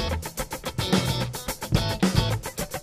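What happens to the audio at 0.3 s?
Nothing goes wrong at 0.3 s, and the audio plays through that moment intact.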